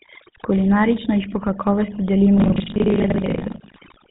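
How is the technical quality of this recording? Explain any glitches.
The technical quality is poor. Three faults are audible in this speech recording: heavy-handed noise reduction and GSM coding throughout, and buffer tearing in the last stretch.

Overdone noise removal runs the whole length. The denoiser was set so aggressively that any frequency band sitting near its noise estimate gets pushed down or cut entirely, and the softer parts of the speech are removed along with the noise. Pauses drop to near silence scattered with twinkling specks. On a spectrogram, the background shows as a dark field with isolated bright dots, and the weaker harmonics look eaten away in patches.

The GSM full-rate codec also colours everything. Its character fits the 13 kbps full-rate scheme, which models the vocal tract and excites it with regularly spaced pulses, keeping only a third of the excitation samples. 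The result is a buzzy, gravelly roughness on the speech. A spectrogram shows a hard ceiling at 4 kHz with nothing above it and a coarse, comb-like texture in the harmonics.

Buffer tearing starts at 2.36 s, right after "jih po kakovosti", and lasts to the end. The writing program and the playback hardware have drifted out of step, so they cross inside every period. About half of each buffer replays audio from around 70 ms earlier, with hard joins on both sides. This produces a robotic 25 Hz rattle, which points to buffers roughly 40 ms long, and it is present only while speech is sounding. In the waveform, abrupt discontinuities repeat every 40 ms, and the spectrogram shows vertical striping at that rate.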